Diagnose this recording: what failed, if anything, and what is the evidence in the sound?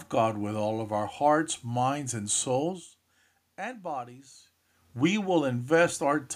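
Nothing in this recording points to a failure at any stage of the chain. What can be heard is the steady background noise of the room and the talker's level shifting at the microphone around two and a half seconds and again near four and a half seconds, as when someone leans back or comes closer.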